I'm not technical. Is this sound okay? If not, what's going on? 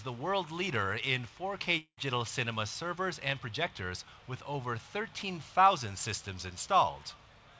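No. At 1.78 seconds there is a long network dropout, which is the likely cause of what you hear. For about 0.2 seconds, no new audio arrives. Instead, the last bit of sound is stretched out into a buzz or hiss that fades away. Near the end of the gap there is a short silence. At 1.99 seconds the sound returns, but the missing part is gone for good. The clip also came through a call line, which removes everything above 8 kHz.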